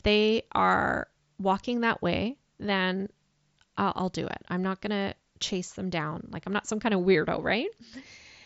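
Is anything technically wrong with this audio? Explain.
No, this is speech carried over a Bluetooth mSBC headset codec working as it should: its bandwidth stops at about 7.7 kHz, and only the light graininess typical of that wideband link remains.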